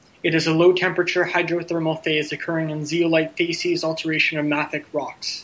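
No technical faults are audible.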